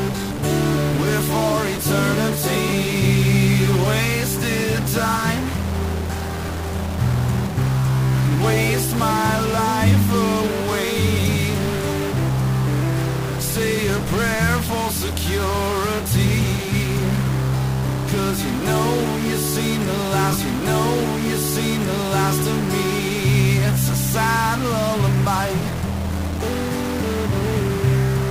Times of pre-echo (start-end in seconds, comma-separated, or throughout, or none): none